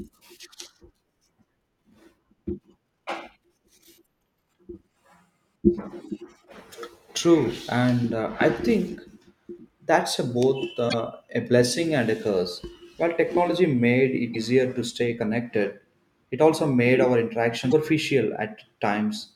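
At 4.01–4.04, 10.86–10.94, 14.30–14.36 and 17.67–17.73 s, damaged data in a compressed stream makes the decoder misread frames and resync, producing brief glitches of 26 to 84 ms.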